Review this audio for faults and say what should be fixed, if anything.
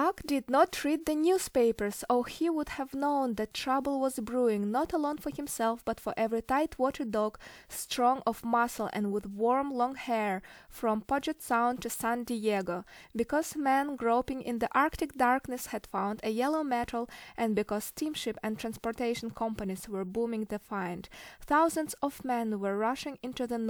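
No faults found; nothing needs fixing.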